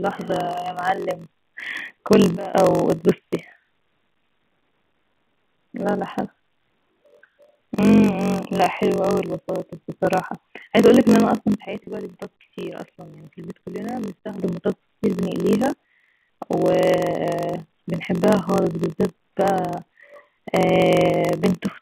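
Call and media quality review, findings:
Block size mismatch (padded), throughout: steady 46.9 Hz buzz, audio slowed to 0.938x speed with timbre unchanged. Zero-padded short writes into 1024-sample reads, unlike resampling errors, which shift pitch.

Sudden gain jump, 2.37–2.55 s (about -16 dB) and 11.65–14.38 s (about -12 dB): sound and background noise step down together, instantly. Likely an unramped digital gain change, not AGC, which would glide.

Packet loss with pitch repetition, 11.84 s, 30 ms, inside the second dip: brief held, buzzy tone bridging the gap. A concealment repeat, not a dropout, since there is no silence. The G.711 A-law line band sits at 150–3400 Hz.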